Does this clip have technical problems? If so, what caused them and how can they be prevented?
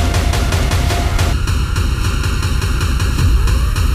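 Yes. From 1.33 s to the end the sound turns hollow and phasey: channel delay (comb filtering), one channel lagging by under a millisecond, cancelling at evenly spaced notches from around 700 Hz. Prevent it by time-aligning both channels before any mono fold-down.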